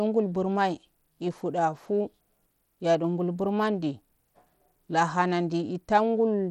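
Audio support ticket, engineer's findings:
Gritty, grainy texture on the speech, whole clip, treble flickering in and out, nothing above 19.7 kHz. Likely Bluetooth SBC compression, fits roughly a 96 kbps link. Starved upper sub-bands lose bits, coarse quantisation adds grit and aliasing.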